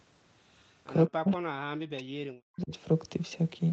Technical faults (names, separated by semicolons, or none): echo leak; speech suppressed in double talk